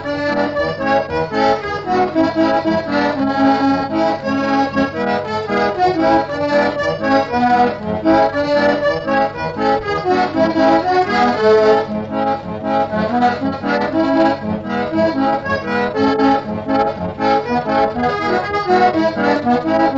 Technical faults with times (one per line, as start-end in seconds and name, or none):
none